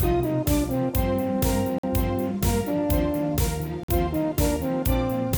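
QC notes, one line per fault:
1.78–1.83 s and 3.83–3.88 s, gap between chunks: two short holes of 50 ms each break the sound, the second falling 2.05 s after the first. The regular spacing points to audio delivered in 2.0 s chunks, with silence inserted at each join rather than material being dropped. Playback stops briefly at every boundary and then resumes, so each one is heard as a clean gap.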